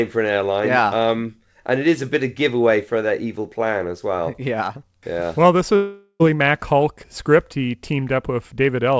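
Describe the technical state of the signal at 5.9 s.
At 5.9 s the speech is inside a long network dropout, running from 5.76 to 6.22 s. About 0.44 s of audio never arrived, likely lost in transit, and the receiver covers the gap by extending the last sound as a buzzy, hissy continuation that fades away, ending in a brief stretch of silence before the speech resumes further on with the lost portion simply gone. Like the rest of the call audio, it carries nothing above 8 kHz.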